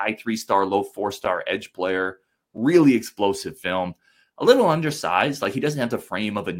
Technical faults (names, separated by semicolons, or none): block of digital silence